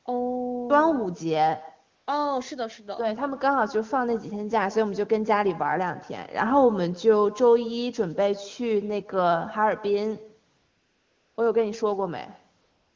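All the way through, every phrase is trailed by a faint, thin copy of itself arriving roughly 150 ms later, sitting about 19 dB below the direct speech. This is echo with no canceller: the far end played the call aloud on a loudspeaker, its microphone caught that playback, and nothing subtracted it before sending it back, so the talker's own audio returns after the network round trip.

Three times the background abruptly turns into a smooth, even hiss that switches on and off: briefly from 1.95 to 2.07 s, for a longer stretch from 10.57 to 11.37 s, and again from 12.61 s to the end. This is AMR comfort noise. The sending phone judged those moments silent and stopped transmitting speech frames, so the receiver filled the gaps with synthetic noise built from a rough description of the background's level and spectrum. The real ambience is replaced by that artificial bed.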